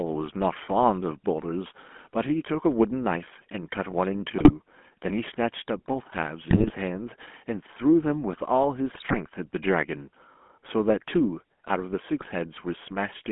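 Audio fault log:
Throughout: GSM full-rate codec. The speech has a plainly audible buzzy, gravelly roughness, which fits the 13 kbps full-rate coder modelling the vocal tract over a coarse pulse excitation. The band is limited to roughly 200 Hz to 3.4 kHz, so everything above sounds dull.
4.38–4.52 s, 6.50–6.71 s, 8.92–9.16 s, 12.20–12.27 s: GSM bit errors. Brief bursts of squawking, popping and gargling break up the speech. Corrupted filter, pitch and gain parameters bend the spectrum and throw the level about, each lasting roughly 0.07 to 0.24 s.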